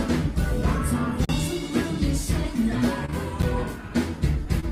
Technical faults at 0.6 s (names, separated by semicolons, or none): none